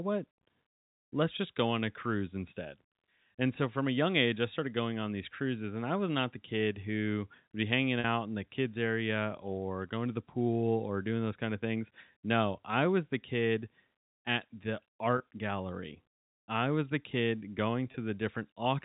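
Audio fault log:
8.00–8.04 s, 15.18–15.20 s and 17.92–17.94 s: packet loss with pitch repetition. Gaps of 40, 20 and 20 ms were filled by repeating the last pitch period. Each one sounds like a slightly held, buzzy moment. The first gap fits two lost 20 ms packets.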